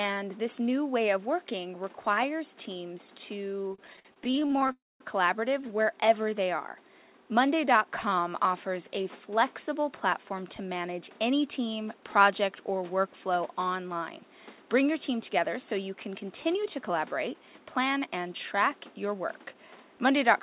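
From 3.62 to 4.7 s, just after "of working requires teams", packets kept arriving late, so the jitter buffer ran dry over and over. This is repeated stalls (stutter): 22 short gaps, the longest 54 ms, were filled by continuing the last sound. Together they stretch that stretch by 339 ms, about 31% of it, with nothing lost, so the audio drags and stutters.

Right after, from 4.72 to 5.01 s, comes a call audio freeze, likely caused by packets held up in transit while the buffer sat empty. The last sound is carried on briefly and then falls to silence for about 220 ms. The audio then resumes exactly where it stopped, inserting a 281 ms gap without dropping any content.

From 16.08 to 18.35 s, between "team together so you" and "track your work", the buffer held more audio than its target, and the receiver shed the excess in a jitter buffer speed-up. It cut many tiny pitch-period slices, about 150 ms in total. 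Playback runs at 106% speed with the pitch unchanged, so the passage sounds hurried.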